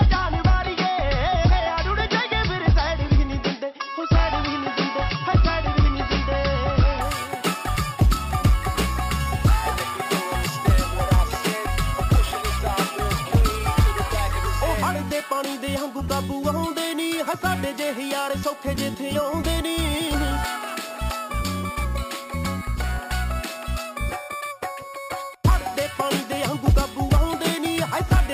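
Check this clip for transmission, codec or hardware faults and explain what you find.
One fault: imaging from sample-and-hold upsampling, from 7.01 s to the end. Each sample was repeated without smoothing, consistent with 12 kHz audio raised to 48 kHz. This mirrors the spectrum into 6–12 kHz at about −18 dB, heard as a metallic fizz tracking the level. On a spectrogram it shows as an inverted copy above 6 kHz; on the waveform, as staircase steps.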